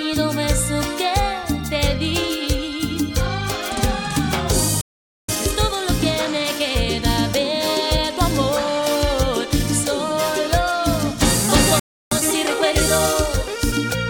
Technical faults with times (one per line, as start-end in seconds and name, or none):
4.81-5.29 playback stall
5.29-8.29 time-compressed catch-up
11.79-12.11 playback stall
12.11-14.01 time-compressed catch-up